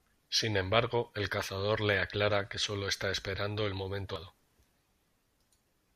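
At 4.16 s, just after "está esperando el momento", damaged data in the compressed stream makes the decoder misread a frame and resync, producing a brief glitch. A spectrogram shows a thin broadband vertical streak; the waveform shows an abrupt discontinuity.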